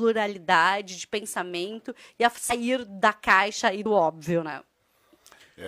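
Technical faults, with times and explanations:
2.47–2.52 s and 3.81–3.86 s, compressed frames skipped: the sound lurches forward twice, first right after "de pensamento e a" going into "da caixa e", then again just after "da caixa e". Whole chunks of coded audio never got played, roughly two frames (around a tenth of a second) the first time and about one frame the second, which fits frames of about 46 ms.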